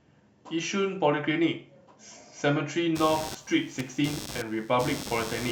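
Computer activity noise enters at 2.95 s and continues to the end of the speech. A buzzy, chirping pattern pulses at roughly a hundred times a second, sitting only about 10 dB under the speech. It follows a rhythm of its own rather than the talker's. Shifting load in the computer, from the processor, graphics card or mouse, is disturbing the ground the audio circuit shares, and that fluctuation lands directly in the recording.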